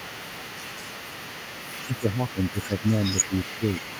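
From 1.85 to 3.86 s the speech sinks in stretches, by up to about 20 dB, for roughly one and a half seconds in all. This is speech suppressed in double talk, likely an echo canceller ducking overlapping talk. The waveform caves in and the spectrogram fades in patches.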